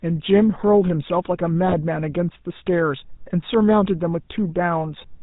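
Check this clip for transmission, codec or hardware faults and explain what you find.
Two faults are present in this speech clip: GSM full-rate coding across the whole recording, and a short burst of GSM bit errors.

GSM full-rate codec, throughout: the speech passed through the original GSM coder, which fits its 13 kbps rate. It models the vocal tract and excites it with a sparse, regularly spaced pulse train, discarding everything above 4 kHz. The result is a plainly audible buzzy, gravelly roughness and a dull, band-limited top end.

GSM bit errors, from 1.67 to 1.75 s: corrupted bits on the link reached the decoder, garbling the filter, pitch or gain parameters. The damage spans roughly four 20 ms frames, heard as a brief squawk and gargling pop where the spectrum lurches or the level jumps.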